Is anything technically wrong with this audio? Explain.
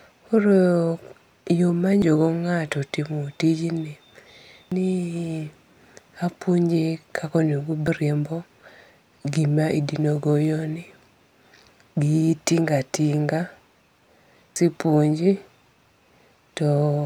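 Yes. Damaged data in a compressed stream occurs at 2.02, 4.72, 7.87 and 14.56 s: corrupted frames make the decoder lose sync and resynchronise, leaving brief glitches.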